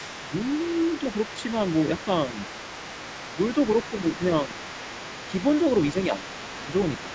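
From 0.0 to 4.26 s, the other side's voice leaks through under the main talker. It sits about 20 dB below the speech. The likely cause is a loudspeaker on the talker's device feeding the microphone, with the echo canceller leaving a residue. At 0.23 to 0.33 s, the speech is suppressed in double talk. The talker's level dips by about 5 dB for roughly a tenth of a second. The canceller likely could not tell the talker from the echo and turned both down. A deeper dip of about 10 dB follows at 3.9 to 4.21 s. From 4.45 s to the end, the leak returns at about 15 dB below the speech. It is louder than before and easier to hear. Further short dips of about 5 dB land at 4.46 to 4.55 s, 5.93 to 6.34 s, 6.55 to 6.69 s and 7.03 to 7.14 s. The talker's voice drops back briefly each time the two sides overlap.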